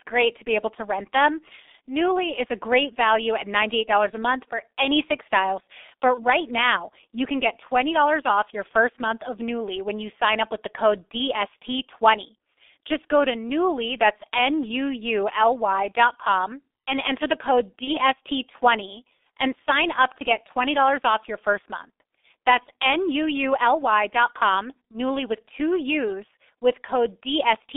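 Throughout, the speech runs through a G.723.1 codec at a rate that fits about 6.3 kbit/s, confined to 300 Hz to 3.6 kHz, so it sounds muffled and hoarse with smeared consonants. VoIP packet loss concealed by the speech codec occurs at 6.14 to 6.25 s, before "now you can get", and at 17.84 to 18.00 s, after "and enter the code". Each gap fits one lost 30 ms frame, which the decoder fills by extrapolating, producing a brief buzzy tone or coloured noise that fades.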